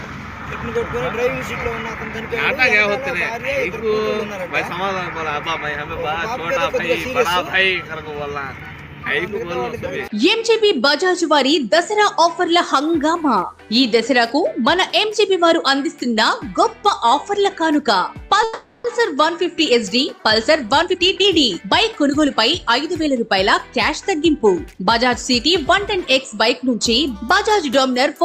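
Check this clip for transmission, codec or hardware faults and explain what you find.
Two transmission faults show up, both in the second half of the clip.

From 18.43 to 18.86 s the sound stalls into a fading buzz or hiss for about 0.41 s, then resumes exactly where it stopped with nothing lost. This is a call audio freeze, likely caused by packets arriving late and the jitter buffer running dry, so the receiver stretched the last sound until they came.

From 20.49 to 23.19 s the audio plays hurried, about 115% speed, at unchanged pitch. This is a jitter buffer speed-up: after the delay built up, the receiver trimmed short pitch-period pieces repeatedly, removing roughly 0.4 s in total to catch up.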